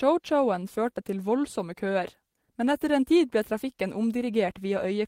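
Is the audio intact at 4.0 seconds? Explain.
Yes, the audio is intact at 4.0 seconds, with no dropout, click, distortion or other fault at that point.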